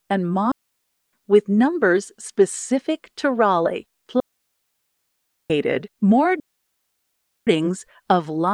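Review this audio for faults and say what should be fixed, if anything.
The wireless link lost too much data three times, so the receiver muted. This is a digital wireless dropout, heard as clean near-silent holes with no noise burst: 0.52–1.13 s (about 0.61 s, ending before "with numbers specific to"), 4.2–5.5 s (1.3 s), and 6.40–7.47 s (about 1.07 s). Keep the transmitter in line of sight and close to the receiver, clear of interference.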